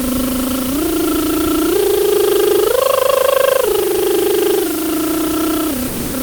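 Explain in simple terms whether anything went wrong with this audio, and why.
Two things went wrong with this music. First, the whole clip has low bit depth with dither. The music was stored with very few levels, which fits about 4-bit audio, and added noise hides the rounding, so you hear a steady, even hiss almost as loud as the music itself, with no distortion.

Second, from 5.87 to 6.13 s, about a quarter of a second, the music drops out and plain steady noise stands in for it. That's likely sound dropped by the voice detector: the sender's detector mistook the music for background, stopped sending, and the receiver filled the gap with comfort noise.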